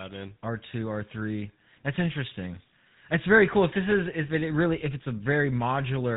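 From start to finish the speech carries GSM full-rate codec damage, plainly audible. The vocal tract is modelled and excited by sparse, regularly spaced pulses, which fits 13 kbps coding, so voices turn buzzy and gravelly, with nothing above 4 kHz surviving.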